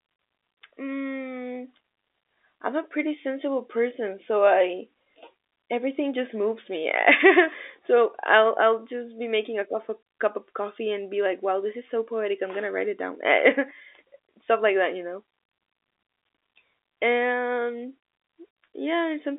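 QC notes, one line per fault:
No faults heard in this telephone-band speech.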